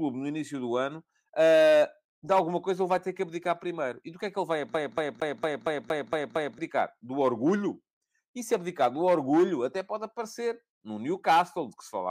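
From 4.74 s to 6.58 s the speech is caught in a CD stuck on one turn. A scratch keeps throwing the laser back, so the same 230 ms slice repeats eight times. Each jump leaves a brief mute. The result is a fast, even stutter.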